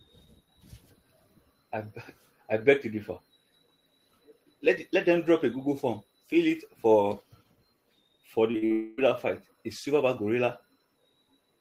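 Short concealed packet loss occurs three times in quick succession, at 8.51–8.56 s, 8.58–8.64 s and 8.66–8.72 s. Each time a few hundredths of a second of audio arrived too late to be decoded, and the receiver bridged the gap by extending the preceding sound, leaving brief smeared wobbles.

From 8.72 s to 8.99 s the speech is replaced by a continuation of the last sound for about a quarter of a second, which then gives way to the real audio further on. This is likely a long network dropout, with roughly 260 ms of the signal never delivered.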